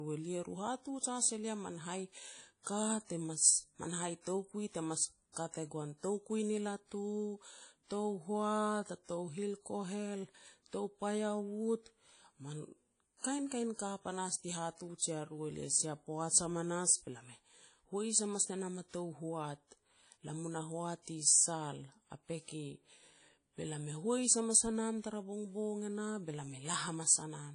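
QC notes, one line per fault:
Throughout: WMA compression. The likely cause is a low-bitrate Windows Media Audio encode, consistent with around 32 kbps. With so few bits, the encoder discards weak spectral detail and quantises the rest coarsely in long transform blocks. The result is a clearly audible washy, ringing quality on the speech, with a hiss that swells and fades with the level. Nothing is present above 10.1 kHz, so the top end sounds dull and closed in.
2.63–2.67 s and 5.32–5.36 s: pre-echo. A sharp onset lands late in a transform block, and the quantisation noise sized for that loud moment is spread back into the quiet stretch before it. The first case follows "has elia man hai" and runs about 37 ms before "te mas man". The second runs about 42 ms before "kat e goan". Each attack is preceded by a short hiss and sounds softened and smeared.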